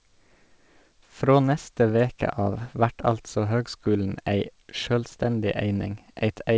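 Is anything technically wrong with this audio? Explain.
No, nothing is technically wrong: the speech has come through a WebRTC call path working as intended, with the top of the spectrum stopping at 8 kHz in the way that fits a G.722 wideband codec running at 64 kbps.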